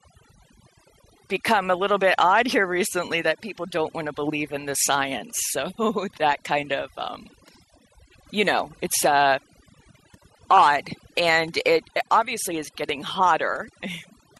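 Throughout, overdone noise removal is at work. The reducer was set too hard. Bands near its noise estimate are pushed almost to nothing, and the quiet edges of the speech go with them. Pauses drop to near silence with twinkling specks.

Also throughout, the sound is dull, with a gurgling, granular roughness. Upper bands flicker in and out. The likely cause is MP2 compression at a low rate, around 80 kbps. Too few bits switch off the top sub-bands and coarsely quantise the rest.

At 10.57 s a brief burst of noise blips cuts through. A second, longer burst runs from 13.90 to 13.97 s. Both are DAB burbling. A small rate of bit errors got past error correction into the audio data. Wrong samples then put short blips of noise into single sub-bands.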